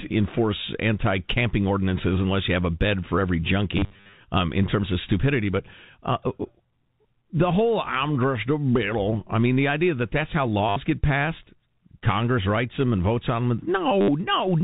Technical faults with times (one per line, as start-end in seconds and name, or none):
3.77-4.13 packet loss with last packet repeated
10.69-10.76 packet loss with last packet repeated
14.01-14.08 packet loss with last packet repeated